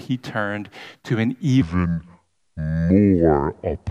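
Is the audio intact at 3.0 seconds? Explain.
No, 3.0 seconds falls inside a section at the wrong speed, running from 1.62 s, just after "turned to an", to the end. It plays at 0.69 times normal speed, likely from the wrong clock, so the speech drags slow and drops about seven semitones deep.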